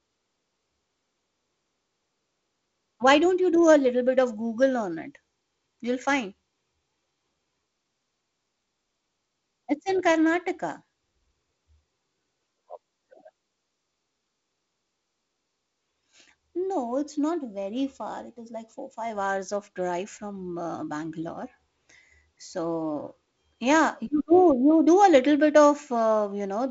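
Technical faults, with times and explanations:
Nothing stood out on listening to this speech recording, which comes through G.722 wideband telephone coding.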